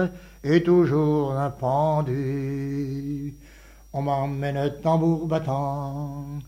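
No technical faults can be heard anywhere in the signal, which stays steady and intact for its whole duration.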